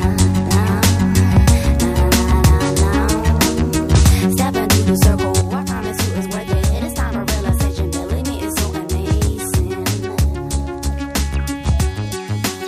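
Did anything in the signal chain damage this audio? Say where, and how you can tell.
Yes. A sudden gain jump at 5.41 s drops sound and noise floor together by about 5 dB until the end, likely a digital gain step applied without a ramp.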